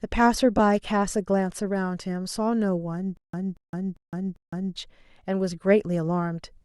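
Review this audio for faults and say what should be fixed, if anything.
At 0.58 s there are lost LE Audio frames: about 15 ms of speech, which fits two 7.5 ms frames, never arrived, and the LC3 decoder filled the hole by reusing the previous spectrum with randomised signs. The voice briefly turns into a noisy smear instead of dropping to silence, which separates this from a plain dropout or a hard cut. Improving the radio link, for example by reducing interference or adding retransmission headroom, would prevent it.

From 3.17 s to 4.76 s the audio stutters with silent gaps. A 233 ms fragment plays, then about 164 ms of digital silence follows, and the same fragment returns on an even 397 ms cycle, four times in all. The likely cause is a stalled stream that replays its last buffer at each retry and then runs empty. The true silence between identical repeats distinguishes it from a seamless loop or a scratch-like skip. 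A larger buffer or better network throughput would prevent it.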